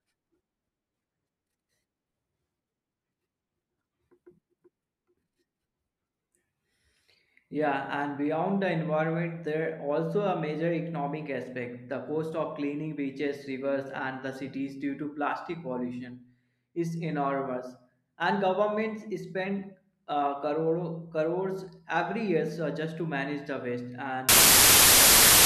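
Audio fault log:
24.29–25.46 s, wrong sample width: the samples were read with a different byte width than they were written with, which fits 32-bit integer data read back as packed 24-bit. Most reconstructed values mix bytes from neighbouring samples, so only fragments keep the top bits of the real signal. The result is a burst of loud, harsh noise with the speech buried underneath, running at 0.75 times normal speed, which also lowers its pitch.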